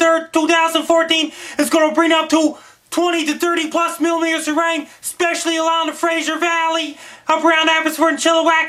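From 2.58 to 7.06 s, digital radio blending to analogue: a 276 ms cross-fade to the FM feed, dropping level about 4 dB, with hiss roughly 40 dB down.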